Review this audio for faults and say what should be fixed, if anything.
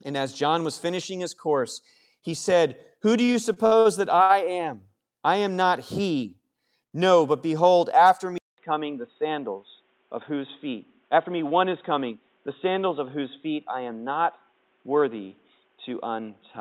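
Between 3.25 and 3.87 s there are repeated stalls (stutter): five gaps, the longest 54 ms, where late packets let the jitter buffer run dry and the last sound got stretched. A deeper buffer or steadier network path would fix it.

At 4.23 to 4.44 s, right before "am I am not", there's a short stall from a late packet, with one sound held about 63 ms too long. Same fix: more jitter buffer headroom.

From 8.38 s, just after "but behold after", the input switched to a poorer device, likely a headset call profile. After a 200 ms silence, nothing comes through above 3.8 kHz, the sound goes dull, and a new noise floor sits about 45 dB down. Lock the input device for the session.

There's a jitter buffer speed-up at 9.22 to 9.56 s (109% speed) and again at 10.30 to 11.31 s (105%). Tiny pitch-period slices get trimmed, so the sound rushes at the same pitch. A gentler buffer-drain setting would smooth that out.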